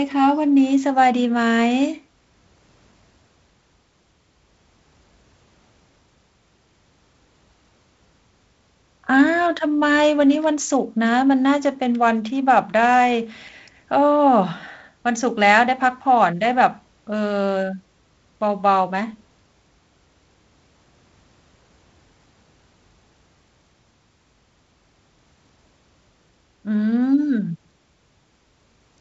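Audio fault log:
No faults heard in this speech recording.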